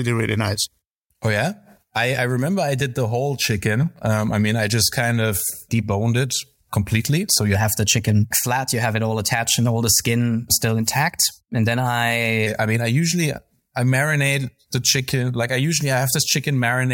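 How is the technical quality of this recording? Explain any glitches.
One glitch stands out. From 7.55 to 12.47 s, just before "I mean I usually", the speech turns higher and hurried, about 9% faster and 1.47 semitones sharp. This is a wrong sample rate: the audio is played back faster than it was recorded, with no conversion. That ratio fits 44.1 kHz material played at 48 kHz.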